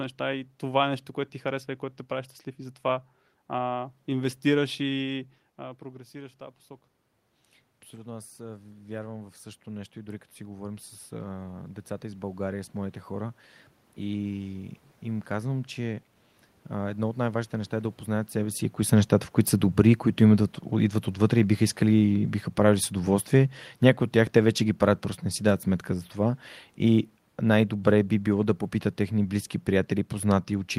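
Automatic gain rising from 7.91 to 17.99 s: after the speech drops by about 13 dB, the gain control slowly lifts gain by about 11 dB, so voice and room noise swell together up to "себе си кои са".

Automatic gain falling from 18.93 to 25.1 s: after "себе си кои са", the control pulls gain down by about 5 dB, so voice and background sink together before "не си дадат сметка".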